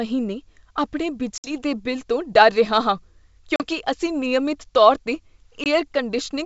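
Packet loss on an ADPCM call hits three times, at 1.38 to 1.46 s, 3.56 to 3.63 s and 5.64 to 5.67 s. The holes last 60, 40 and 20 ms, roughly three, two and one packets. Each gap is hard-edged silence. The decoder's predictor and step size then lag the sender's, so the speech returns with brief distortion before settling.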